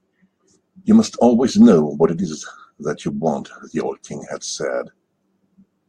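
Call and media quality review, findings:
Hard clipping, 1.62–1.74 s: brief crackle on speech peaks; level about 2 dB over a gain stage or converter ceiling, tops flattened, adding high harmonics.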